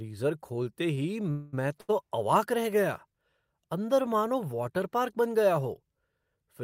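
At 1.31 s the speech halts for about 220 ms, until 1.55 s, and the last sound is carried on as a fading buzz before the speech resumes where it stopped, with nothing lost. This is a call audio freeze, likely packets held up in transit draining the jitter buffer.

From 1.81 to 1.91 s, just before "अवाक रह गया", there is a short stall from a late packet: one packet arrived after its playout time, so the receiver stretched the preceding sound by about 78 ms, heard as a held, slightly buzzy syllable, then continued without dropping anything.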